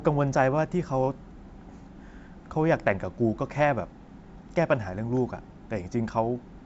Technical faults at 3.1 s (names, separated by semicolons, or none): none